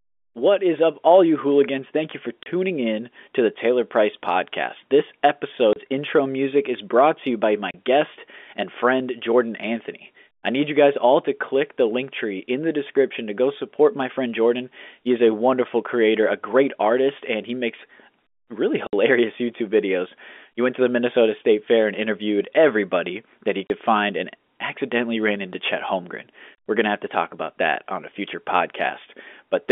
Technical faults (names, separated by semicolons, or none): packet loss filled with silence